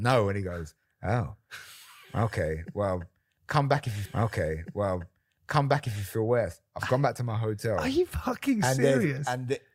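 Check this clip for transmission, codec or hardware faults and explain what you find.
There is one transmission fault, a repeated stream segment.

Stream segment repeated, 4.05 to 6.05 s: right after "come back if you", the player fetched or queued the same stretch of the stream a second time, so 2 s of speech plays through again before the clip moves on to "feel worse I've gone". The jump back leaves a small blip where the duplicated segment begins. The listener hears the passage repeat, and the clip runs 2 s longer than the original.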